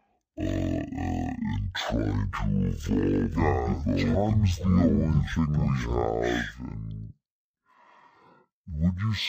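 Stereo read as mono runs from the first second to the last: the two channels' interleaved samples were taken in turn as one continuous mono stream, so every left-right pair became two consecutive samples. The speech therefore plays at half speed, drawn out and sluggish, and a full octave low, 12 semitones down. Because alternate samples come from different channels, a fainter mirrored copy of the sound also shows up across the upper half of the spectrum.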